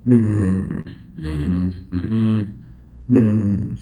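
From the start, the sender's clock runs roughly 3 percent slow against the receiver's, a case of clock drift between sender and receiver. The receiver's jitter buffer keeps draining, so it must keep stretching the audio to avoid running dry, which leaves the timing slightly unsteady throughout.

From 0.09 s to 3.79 s, repeated timing corrections keep the receiver in step by repeating short pieces, all in the same lengthening direction and unevenly spaced. Playback runs at 98 percent speed, adding about a tenth of a second overall, heard as faint hiccups and a dragging tempo.

At 0.81 s to 0.88 s comes a short stall from a late packet. The buffer emptied, and the receiver held the last sound for 38 ms until the packet arrived, then resumed where it left off. Nothing is lost, but the sound lingers with a slight buzz or dip, and the delay grows by 38 ms.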